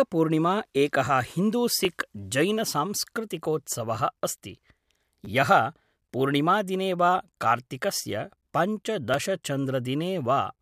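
When fresh samples failed to reach the playback device in time, it replayed its last buffer of about 10 ms. In this speech, that repeated buffer is heard as brief clicks at 1.85 and 9.14 s and a short double-repeat buzz from 5.25 to 5.27 s.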